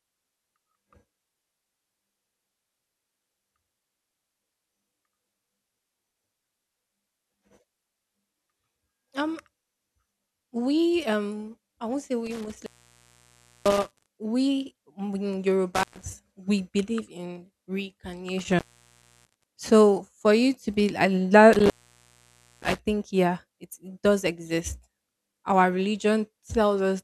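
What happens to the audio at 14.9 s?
Nothing goes wrong at 14.9 s; the speech runs on without any dropout, click, glitch or other fault at that point.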